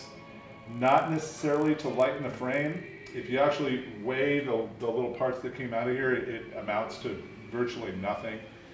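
From the start to 3.24 s, a steady 50 Hz buzz rides on the sound. This is a resampler restarted on every block. The converter treated each 20 ms block as if it stood alone, with no neighbouring samples at its edges. That leaves a small error at every block boundary, 50 times a second. The boundaries are too close to hear as separate ticks, so they merge into a buzz that follows the signal. The fault fits a conversion from 48 kHz down to 16 kHz.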